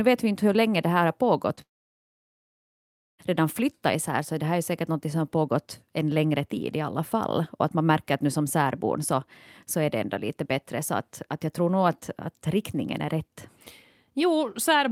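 This is a speech clip with two network faults close together. At 1.55 to 1.59 s there is short concealed packet loss. About 20 ms of audio failed to arrive, and the decoder patched the gap, leaving a brief smear. Right after, from 1.61 to 3.21 s, the sound becomes a fading buzz or hiss and then about 1.5 s of silence. This is likely a long network dropout, with about 1.6 s of audio lost. Speech resumes at "redan flyttat isär så", and the missing part never returns.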